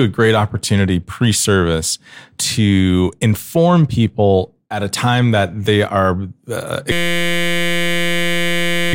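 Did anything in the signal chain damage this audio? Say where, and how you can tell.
Yes. A system hang loop at the driver buffer, 6.92 to 8.93 s: one 5.8 ms slice repeats as a 172 Hz buzz, with identical waveform cycles and a harmonic spectrogram comb.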